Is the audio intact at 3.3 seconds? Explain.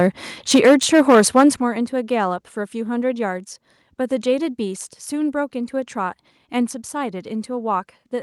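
Yes, at 3.3 seconds the speech plays through cleanly, with no dropout, click, distortion or other audible fault at that moment.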